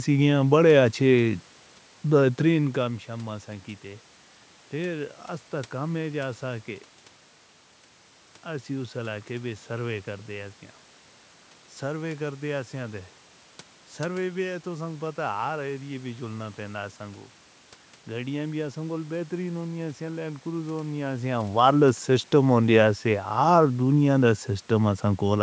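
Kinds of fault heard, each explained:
Clock slip clicks: A faint, steady rattle of ticks runs from 0.10 to 25.41 s, roughly every 50 ms. This is likely two unsynchronised clocks about 400 ppm apart.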